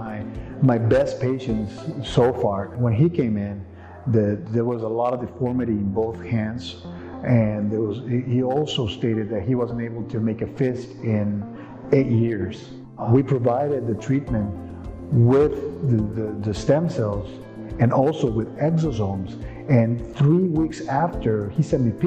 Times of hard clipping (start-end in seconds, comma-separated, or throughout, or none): 0.69-0.91, 11.93, 13.15, 16.70